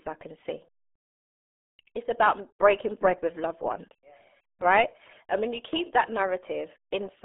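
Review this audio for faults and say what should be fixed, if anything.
The speech is muffled and gargly from start to finish, with a boxy, telephone-like narrowness. Nothing comes through above about 3.8 kHz, and the usable band sits roughly between 250 Hz and 3.5 kHz. This is RealAudio 14.4 codec damage, and it is heavy. The codec squeezes speech into a tiny bitrate, which fits an 8 kbit/s stream, by modelling the voice coarsely, discarding the upper band and smearing what remains into a warbling texture. To prevent it, capture and distribute the recording through a modern wideband codec at an adequate bitrate rather than a legacy dial-up format.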